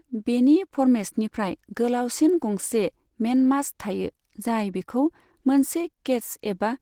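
Speech throughout shows likely Opus compression: hoarse, grainy and muffled rather than MP3-style swirling holes, which fits a low bitrate around 16 kbps, with content reaching about 20.2 kHz.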